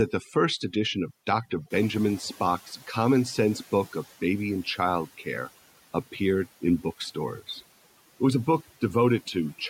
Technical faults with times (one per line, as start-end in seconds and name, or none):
0.00-9.70 overdone noise removal
1.70-4.07 noise suppressor catching up